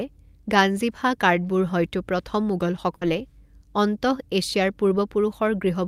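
A burst of packet loss at 2.95 to 3.03 s: about 60 ms of speech is missing, bridged by a fading continuation of the preceding sound before the audio resumes.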